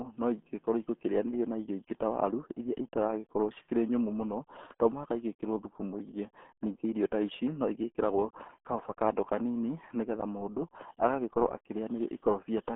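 Throughout, the RealAudio 14.4 codec squeezes speech into a muffled, gargly band with nothing above 3.6 kHz, which fits an 8 kbit/s stream. Unlike a clean telephone band limit, heavy coding damage adds gargle.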